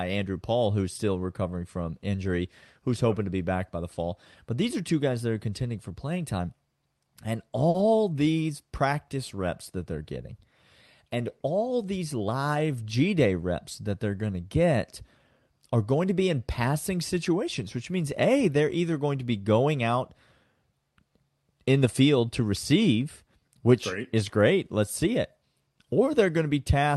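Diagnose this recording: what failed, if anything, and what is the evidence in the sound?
Short stall from a late packet in the network jitter buffer at 7.69 to 7.76 s, before "these practice reps that". The buffer ran dry. About 50 ms of sound was stretched, and nothing is lost.

Jitter buffer speed-up from 12.00 to 12.43 s, after "and all". Speech runs at 111% speed with pitch unchanged. Pitch periods were trimmed, removing roughly 50 ms of buffered delay.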